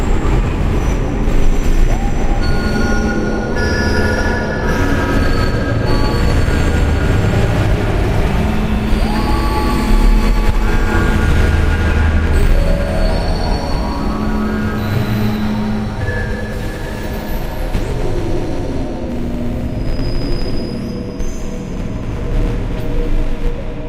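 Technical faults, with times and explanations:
No technical faults detected.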